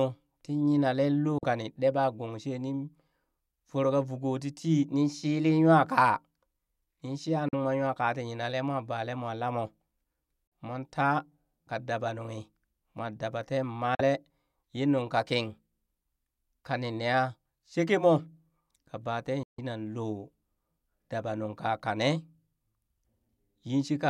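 Speech with five brief silent holes, likely Bluetooth dropouts: about 43 ms each at 1.38, 7.49, 10.47 and 13.95 s, consistent with two lost frames, and about 150 ms at 19.43 s. The waveform drops to silence, and the spectrogram shows blank vertical stripes before the speech resumes further along.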